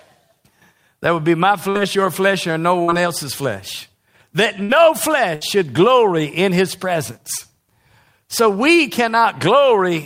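Speech with four bursts of packet loss, at 1.69–1.78 s, 2.83–3.02 s, 4.63–4.72 s and 5.35–5.44 s. In each, several packets never arrived in time. The receiver stretched the last sound for about 50 to 60 ms, fading it as a held buzz or hiss. Then the speech jumps ahead, skipping about 60 ms. The second gap runs longest, close to 0.2 s.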